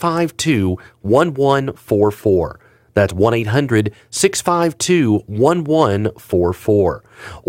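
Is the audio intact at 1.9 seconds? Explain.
No. From 1.92 to 2.03 s the speech shows hard clipping: its peaks reach the ceiling of a stage that cannot pass anything larger, with about 0 dB of overdrive, so they are cut flat. The flattened tops add high harmonics, heard as brief crackle on those peaks.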